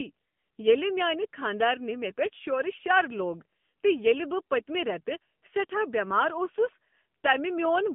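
Throughout, the speech passes through the AMR narrowband mobile codec at a low rate, consistent with about 7.95 kbps. Only a band from 150 Hz to 3.5 kHz survives. Its sparse-pulse vocal-tract model leaves the voice plainly buzzy and synthetic.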